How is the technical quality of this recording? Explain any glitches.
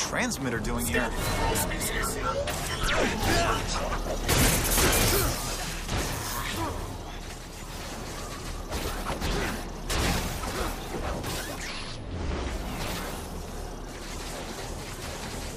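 The recording has one clear technical fault: a sudden gain jump at 5.35 s. From that instant to the end, everything drops by about 5 dB in a single step, with no fade. The likely cause is a digital gain setting changed between two samples without a ramp. What distinguishes it from a quieter source or automatic gain control is that the background noise steps down together with the sound, instantly and evenly, rather than sliding down or recovering gradually.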